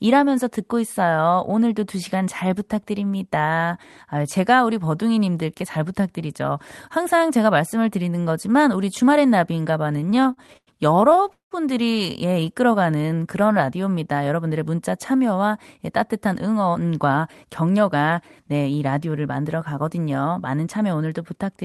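Speech, carried over a call path whose audio is band-limited to about 12 kHz. From 9.93 to 11.53 s there are repeated stalls (stutter). Packets arrived late, and the jitter buffer kept running dry. About twenty brief gaps were filled by stretching the last sound. The longest lasts 181 ms. Nearly a third of that stretch is filled sound, so it drags and stutters. From 12.33 to 13.81 s a jitter buffer slow-down follows. The buffer was short of audio. It repeated single pitch periods and pause fragments to rebuild a reserve. Speech plays at 88% speed with unchanged pitch, adding 182 ms of drawn-out sound. From 15.78 to 18.10 s comes a jitter buffer speed-up. Too much audio had piled up in the buffer. Short pitch-period pieces were cut to reduce delay, removing about a fifth of a second. Speech runs at 107% speed at the same pitch and sounds hurried.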